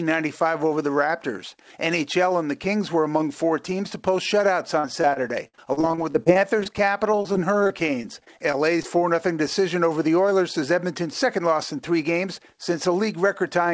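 From 4.80 to 6.67 s, and again from 7.12 to 8.97 s, packets go missing over and over, and the receiver patches each hole by extending the last bit of sound. This is repeated packet loss, heard as choppy sound with pieces dropped. It is worse in the first stretch, where the longest hole is 55 ms and about a fifth of the span is filled in. In the second stretch the longest hole is 23 ms and about a tenth is filled in.

From 10.70 to 11.53 s the jitter buffer has built up too much delay. To shed roughly 50 ms, it trims many short pitch-period pieces in a row. This jitter buffer speed-up makes the sound run about 5% fast at unchanged pitch, so it comes across as hurried. Throughout, the sound carries nothing above 8 kHz, which fits a wideband call codec.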